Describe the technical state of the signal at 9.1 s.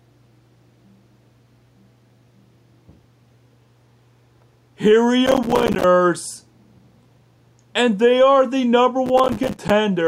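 At 9.1 s the signal is inside a burst of processor overload crackle, running from 9.06 to 9.70 s. The processor keeps missing deadlines for buffers of around 5 ms. Each miss drops in a short, hard-edged silence. Dozens of these gaps together produce a gritty crackle over the sound.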